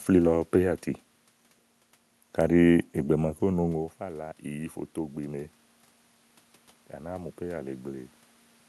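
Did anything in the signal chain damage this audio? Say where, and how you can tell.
Yes, in call processing. From 3.16 s to 5.59 s the automatic gain control is rising: speech and room noise swell together by about 4 dB as it slowly raises its gain after the input falls by about 14 dB, with the talker moving away around 3.5 s.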